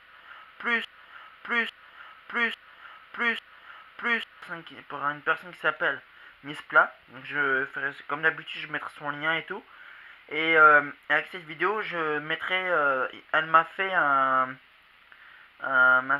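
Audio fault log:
0.00–4.42 s broken-record loop. Already under way from the start, a 0.85 s fragment repeats four times, back to back, likely from a stalled stream resending its last chunk.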